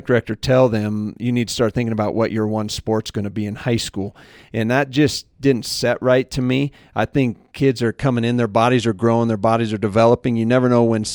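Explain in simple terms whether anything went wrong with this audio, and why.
From 0.0 to 7.81 s there is imaging from linear upsampling: crude rate conversion dulls the highest tones and leaves a faint metallic shimmer above 12 kHz on hissy sounds.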